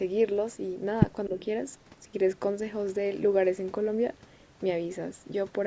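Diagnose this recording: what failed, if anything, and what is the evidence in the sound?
At 1.29 to 1.39 s, the speech dips by about 10 dB, with roughly 70 ms of it affected. This is likely speech suppressed in double talk inside the call processing. The echo canceller, hearing both sides at once, could not tell the near talker from loudspeaker echo and attenuated everything. On a waveform, the envelope pinches inward there. A spectrogram shows the energy fading there.

Directly after, from 1.39 to 1.45 s, a faint delayed copy of the sound appears, lagging about 245 ms and sitting about 30 dB below the main speech. This is likely an echo leak. The far end's canceller left residual loudspeaker pickup in its microphone signal and sent it back. On a spectrogram it shows as a weak repeat of the earlier harmonic pattern, shifted right, within the band that stops at 8 kHz.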